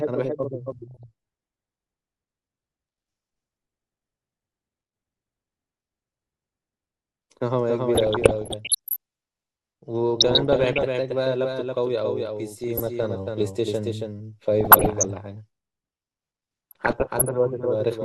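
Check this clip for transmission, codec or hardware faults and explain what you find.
Two faults affect this speech clip: a doubled audio track throughout and repeated DAB burbling.

Doubled audio track, throughout: a second full-band copy of the speech trails the original by roughly 300 ms, about 5 dB quieter. It carries no decay or room colour, so it sounds like a dry, distinct repeat. The likely cause is a second, slower capture path mixed back in.

DAB burbling at 0.88–1.03 s, 7.95–8.96 s, 10.20–10.87 s, 12.64–13.06 s, 14.61–15.18 s and 16.71–17.29 s: weak reception lets bit errors slip past error correction into the MP2 data. Corrupted samples put short blips of noise in single sub-bands, and corrupted scale factors make sub-bands jump in level for up to a frame, producing muddy bubbling and squelching chirps in the heavier bursts and a few watery blips in the light one at 0.88 s. 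The longest and densest burst is at 7.95 s.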